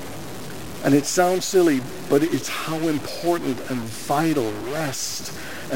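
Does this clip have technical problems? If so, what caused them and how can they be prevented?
Yes. A distortion runs through the whole clip, and even the quiet passages carry a gritty noise floor instead of falling silent. This is most likely a stuck bit, one data line of the converter or interface held at a fixed value. Samples that should differ in that bit are pushed off by its weight, so on a waveform low-level stretches look offset and blocky. On a spectrogram there is a broadband haze of harmonics that fills the gaps. Checking the converter wiring, connectors and data-path hardware, and replacing whatever part is faulty, prevents it.

Two sudden jumps in the sound occur at 1.44 s and 3.04 s. These are likely dropped buffers from an overrun, where the software failed to collect incoming samples before the hardware overwrote them. Roughly 10 ms goes missing at the first and about 20 ms at the second, spliced straight together with no gap. 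On a waveform each shows as an abrupt discontinuity, and on a spectrogram as a thin vertical broadband line. Larger buffers, a higher-priority audio thread and fewer competing processes prevent this.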